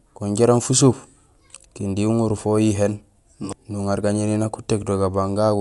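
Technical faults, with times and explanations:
Throughout: Dolby Digital compression, likely, at a low bitrate near 64 kbps. The speech is dull with nothing above 11.5 kHz, and spectral lines given no mantissa bits are filled with dither noise, leaving rough, fluttering noise around tones.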